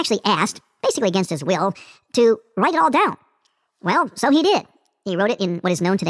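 From start to finish, the speech runs high and hurried because of a wrong sample rate. Audio captured at 16 kHz is played back at 24 kHz without conversion, so speed rises 1.5 times and pitch about seven semitones. On a spectrogram, harmonics and formants sit stretched upward, with each event compressed in time.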